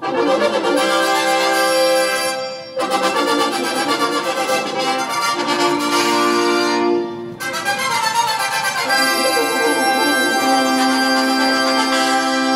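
Nothing technically wrong can be heard anywhere in this audio. No fault of any kind turns up at any point in the recording.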